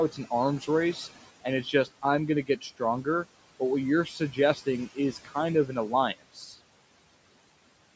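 Noise suppressor artifacts run through the whole clip. The room noise sits about 19 dB below the speech. The suppressor treats that steady noise as something to remove, frame by frame. It pushes it down by about 18 dB between words. The noise then rises again under the voice.

Speech cut by the noise suppressor happens five times. The cuts fall at 1.64 to 2.04 s, at 2.46 to 2.81 s after "going to", at 4.06 to 4.38 s after "what you're", at 4.95 to 5.36 s, and at 6.19 to 6.57 s after "of an". Each time, the suppressor mistakes quiet speech for noise. It lowers that speech by about 9 to 17 dB, for a brief fraction of a second or so. Those sounds come out faint and swallowed.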